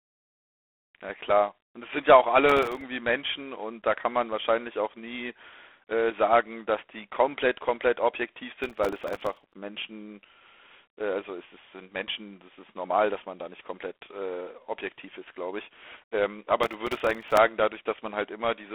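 A speech recording carried throughout by G.726 ADPCM: nothing reaches above about 3.8 kHz, and a harsh, rasping hiss rides on the speech and rises with its level, which points to the 24 kbit/s rate. Processor overload crackle tears through the sound from 2.49 to 2.82 s, 8.64 to 9.53 s and 16.63 to 17.37 s. In each burst, some twenty to seventy missed deadlines drop short slices to silence with hard edges, which fits buffers of roughly a millisecond and a half.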